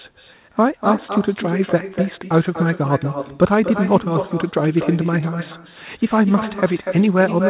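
Throughout the speech, an echo with no canceller returns each phrase about a fifth of a second later, roughly 9 dB quieter. It is a distinct repeated copy, not the smooth decay of room reverberation.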